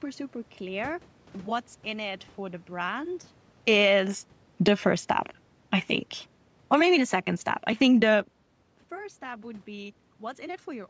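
A speech recording with automatic gain falling twice. From 3.57 to 4.85 s the control pulls level down about 5 dB, and from 6.57 to 8.11 s about 6 dB. Voice and room noise sink together. Automatic gain rising runs from 6.83 to 9.56 s, lifting about 4 dB. It overlaps the second drop. Around 3 s and 8 s the talker also shifts position, which changes only the voice, not the background.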